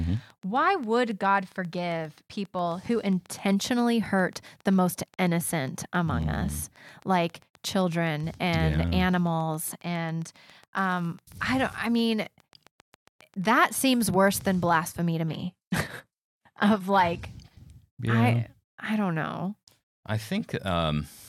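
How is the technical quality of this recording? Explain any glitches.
The recording has two clear technical problems: a long train of clicks over the first part, and a short drop in stream quality near the end.

From 0.04 to 14.70 s there is a train of clicks. Interference from nearby equipment or a faulty connection is the likely cause, injecting a pulse at a steady 7.44 per second. That gives roughly a hundred evenly spaced ticks, about as loud as the speech itself, audible through pauses too.

From 15.28 to 17.28 s the adaptive stream switched to a lower bitrate when the connection slowed. The change is abrupt and has no gap. Nothing is left above 12.3 kHz, and the speech takes on an artefact-laden quality, which suggests a fall from a good AAC stream to a very low-rate HE-AAC one.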